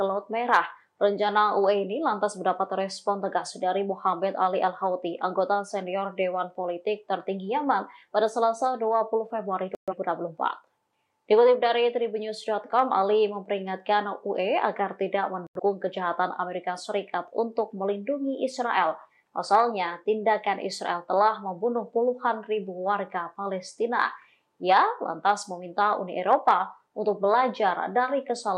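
At 9.75 s the receiver stopped getting usable digital frames, most likely because the signal dropped or the frames failed their checksum, so it muted. The sound cuts to silence until 9.94 s, a gap that points to about three lost frames. A shorter digital broadcast dropout follows at 15.47 s, with the audio silent until 15.60 s, which fits two lost frames. Whatever was broadcast during each hole is gone.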